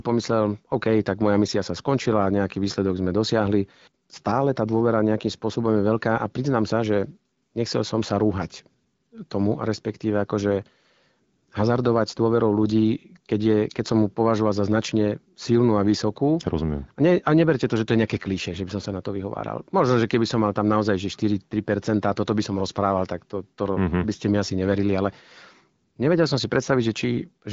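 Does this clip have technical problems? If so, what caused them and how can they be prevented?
No, there are no technical problems to fix or prevent.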